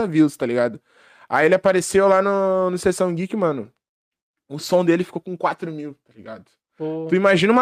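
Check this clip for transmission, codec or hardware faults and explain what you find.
Nothing in the speech points to a fault anywhere along its path. There is nothing in the recording that calls for further comment.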